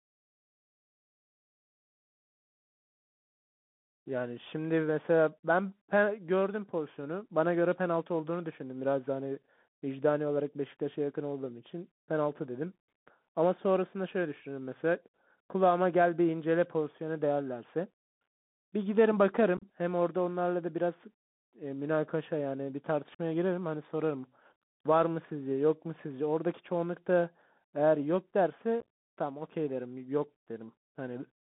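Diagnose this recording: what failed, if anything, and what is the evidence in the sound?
Codec stage: a Bluetooth CVSD headset codec runs throughout, passing only 150 Hz to 3.6 kHz. Scratchy sibilants and granular hiss come from one-bit slope tracking, which plain band-limiting never adds.

Headset link: unconcealed Bluetooth headset packet loss at 19.57–19.64, 23.15–23.19 and 28.80–28.83 s leaves abrupt holes adding up to about 41–68 ms per event. Concealed loss would be smoothed over, not left silent.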